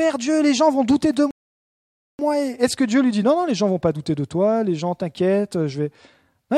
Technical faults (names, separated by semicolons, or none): playback stall